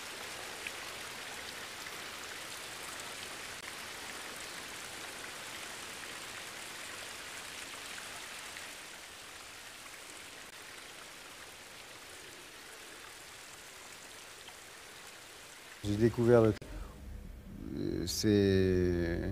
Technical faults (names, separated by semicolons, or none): damaged data in a compressed stream